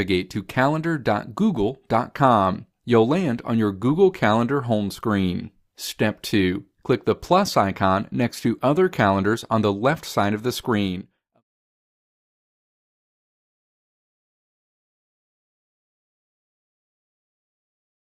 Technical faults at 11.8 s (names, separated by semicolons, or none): none